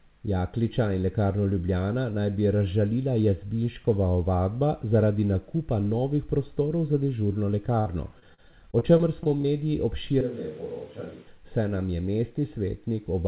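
From 7.8 to 9.46 s, right after "za dežurno", there is repeated packet loss that gives the speech a robotic sound. A rapid series of dropouts, the longest about 56 ms, is patched by extending the preceding audio, covering roughly 15% of that stretch. The result is choppy speech with fragments missing.

Between 10.21 and 11.27 s, ending just before "saj nam je", the speech abruptly turns hollow and roomy, with thinner bass. The level falls by about 5 dB, and the room noise rises to about 25 dB below the speech. This likely comes from a switch to a distant microphone. Throughout, the narrowband call path leaves nothing above 4 kHz, which fits G.711 mu-law.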